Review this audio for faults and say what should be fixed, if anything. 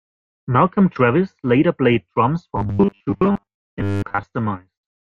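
From 2.56 to 4.23 s, right after "later played drums", the speech collapses into a rigid, metallic buzz pitched at 100 Hz that only loosely tracks the words. This robotic sound from repeated short buffers is likely caused by audio arriving too slowly, so the playback chain keeps looping the last fragment, about 10 ms long to match the 100 Hz buzz, and skips most of the real audio in that stretch. To prevent it, enlarge the jitter or playback buffer and give the audio thread enough priority that new data always arrives in time.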